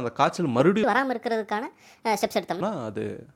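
Speech clip in which a section at the wrong speed runs from 0.84 to 2.61 s, likely from a player or edit resampling that stretch against the wrong clock. It plays 1.46 times too fast, so the voice turns hurried and jumps up about seven semitones.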